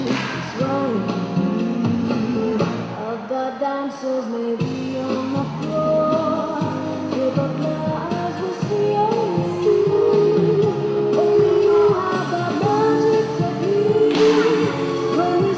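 No faults are audible anywhere in the clip.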